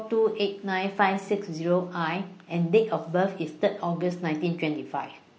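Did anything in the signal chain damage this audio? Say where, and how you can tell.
Yes. Low-delay AAC compression runs through the whole speech clip, at the codec stage. The voice sounds rough and grainy, with noise filling the spaces between the pitch harmonics and a thin, synthetic top band. This is likely an AAC-ELD encoder: its short frames resolve voice harmonics poorly and use up bits, so at a low rate, which this level of damage fits at around 32 kbps, detail is replaced with shaped noise.

AAC frame loss with concealment occurs at the network or transport stage, from 1.25 to 1.30 s. There is a brief smeared, noisy patch where the speech loses its clarity for a moment and then recovers. The decoder was missing data for about 30 ms, which fits a single lost frame. It filled the gap by reusing the last good spectrum with scrambled phase, so the result is a blurred fill rather than a clean dropout.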